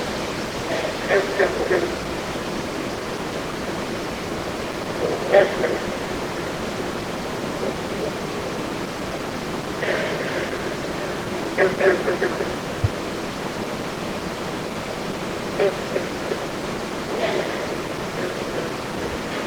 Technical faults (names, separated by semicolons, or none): none